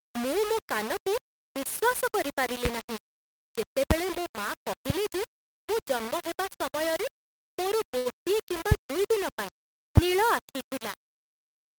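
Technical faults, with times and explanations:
Throughout: low bit depth without dither. The speech has a harsh, grainy distortion that rises and falls with the voice, with quieter syllables turning gritty and the softest moments sputtering or cutting to silence. This is likely from samples being rounded to only about 5 bits with no dither. The rounding error follows the waveform instead of sitting as steady hiss, leaving an error level only about 10 dB below the speech.
7.97 to 8.07 s: short stall from a late packet. Just after "ଜନ୍ମ ହେବା ସମୟରେ ମୋର", the sound hangs unnaturally for a moment, with a slight buzz or dip before "କିମ୍ବା ଦୁଇ ଦିନ" resumes. A packet arrived late, the jitter buffer emptied, and the receiver stretched the last audio for about 80 ms to cover the gap. Nothing was lost, and playback resumed from where it stopped, so everything after runs about 80 ms later.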